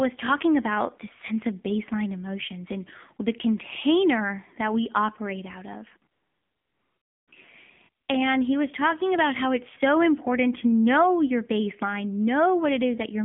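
Throughout, the speech sounds buzzy and synthetic, confined to about 150 Hz to 3.4 kHz: the AMR narrowband mobile codec, at a low rate that fits roughly 7.4 kbps.

From 6.12 to 7.28 s, after "we operate out of", and again from 8.04 to 8.08 s, a smooth, steady hiss replaces the background. This is AMR comfort noise, where the receiver synthesised noise during gaps without speech frames.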